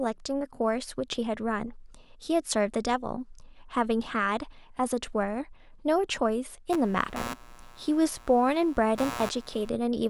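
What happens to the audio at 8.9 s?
At 8.9 s the speech sits over computer activity noise, running from 6.72 s to 9.69 s. Processor or peripheral load shifts the shared ground, injecting a buzzing, chirping texture pulsing at around 100 per second, roughly 15 dB below the speech, and tracking machine activity rather than the sound.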